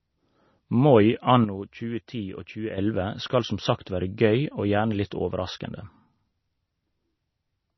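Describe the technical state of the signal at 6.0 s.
At 6.0 s, as throughout, the speech shows heavy damage from likely MP3 compression, near 24 kbps: nothing above 6 kHz, and weak spectral components dropping frame to frame, sounding watery.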